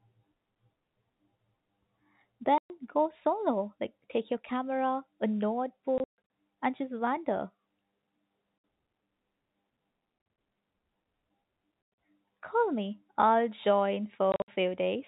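Packet loss filled with silence chops the speech at 2.58, 5.98, 8.58, 10.18, 11.82 and 14.32 s. Missing packets become dead gaps of 60 to 220 ms, several broken into scattered holes in steps that fit 20 ms packets. Each hard edge cuts against the G.711 telephone band.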